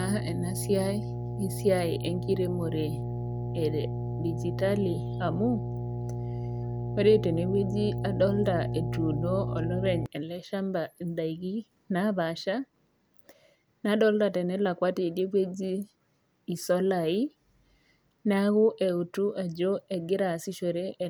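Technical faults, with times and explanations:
0.00–10.06 s, mains hum: a steady 60 Hz tone with low harmonics sits under the speech, nearly as loud as it, roughly 5 dB below. Power-line current has leaked into the signal, through a ground loop or a nearby transformer, until it stops at 10.06 s.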